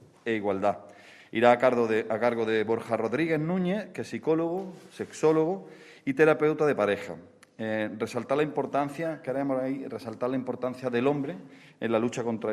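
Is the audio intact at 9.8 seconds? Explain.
Yes, the audio at 9.8 seconds is intact, with no fault at that moment.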